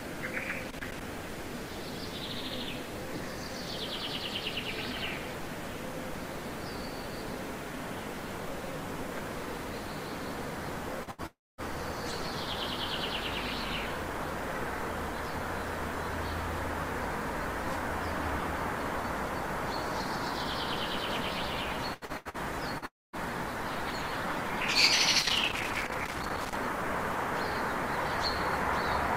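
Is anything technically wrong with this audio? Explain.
Yes. At 0.63 to 1.01 s and again at 25.19 to 26.56 s, irregular bursts of crackle and scratching come from loose connector crackle, a worn or dirty contact making and breaking and chopping the signal.

At 11.03 to 11.10 s and 22.78 to 22.85 s, a brief smear is short concealed packet loss: about 40 ms never arrived, and the receiver continued the preceding sound before blending back.

From 11.11 to 11.21 s, a burst of packet loss leaves a held, fading continuation of the last sound covering about 73 ms, after which the audio resumes with 80 ms gone.

At 11.26 to 11.61 s and 22.86 to 23.16 s, the sound is stretched into a fading buzz or hiss that then drops to silence before the audio returns further on. This is likely a long network dropout, losing about 320 ms and 280 ms respectively.

Between 21.94 and 22.37 s, the audio turns choppy and robotic. 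This is repeated packet loss: four gaps, the longest 81 ms, were patched one after another, so about 56% of that stretch is filled-in sound.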